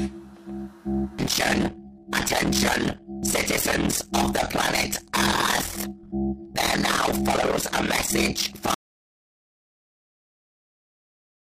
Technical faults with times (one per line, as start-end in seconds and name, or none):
1.19 damaged data in a compressed stream
3.23 damaged data in a compressed stream
8.74-11.42 audio dropout to silence